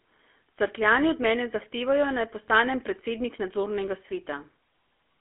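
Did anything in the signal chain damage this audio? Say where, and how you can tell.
Yes. Throughout the speech there is a buzzy, gravelly roughness, and everything above about 3.4 kHz and below 300 Hz is gone. That points to the codec stage: a GSM full-rate codec, consistent with 13 kbit/s, resynthesising the voice from a vocal-tract model and a coarse pulse excitation.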